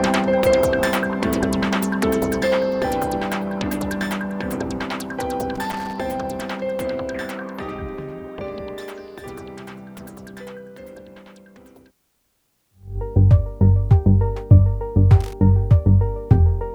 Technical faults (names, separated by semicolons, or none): loose connector crackle